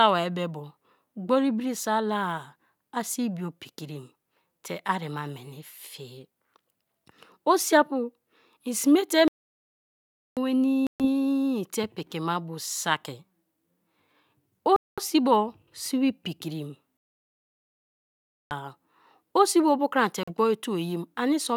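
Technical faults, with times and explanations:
9.28–10.37 s and 16.97–18.51 s, playback stall: the speech stops dead in mid-flow and the output falls fully silent for about 1.1 s, then about 1.5 s the second time, which begins right after "si pikrim". Each gap is long enough to feel like the audio has frozen before it resumes. The likely cause is the player running short of data, or its thread being blocked, so nothing reached the output until it caught up.
10.87–11.06 s, 14.76–14.99 s and 20.23–20.31 s, Bluetooth stall: three short dropouts to silence of about 131 ms, 214 ms and 42 ms, each cutting into the speech and then picking up again. They are brief and abrupt, more a stutter than a freeze. This fits radio interference delaying packets on the wireless link. The headphones' small buffer runs empty and output pauses until the resent packets arrive.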